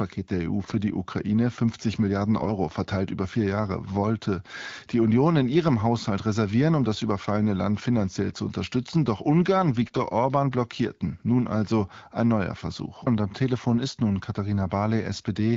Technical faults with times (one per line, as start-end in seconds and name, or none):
0.63-0.74 AMR bit errors
2.37-2.51 AMR bit errors
9.82-10.00 AMR bit errors